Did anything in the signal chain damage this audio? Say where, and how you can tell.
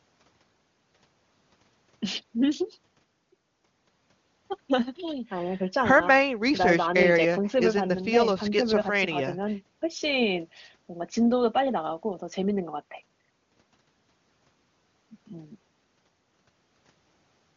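No, nothing in the chain audibly damages this speech: it has passed through the AMR wideband (HD Voice) codec at what sounds like its top rate, around 23.85 kbit/s, which leaves at most faint coding traces, and the band stops at about 7.4 kHz, as that codec's design dictates.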